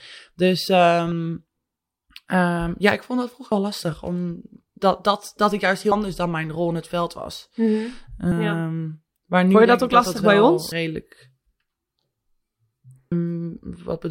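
Audio missing between chunks in this speech at 1.12, 3.52, 5.92, 8.32, 10.72 and 13.12 s: roughly a tenth of a second vanishes each time, as after "ja ik vond dat", with no gap. The steady 2.4 s spacing likely reflects 2.5 s recording chunks losing a slice at each handover.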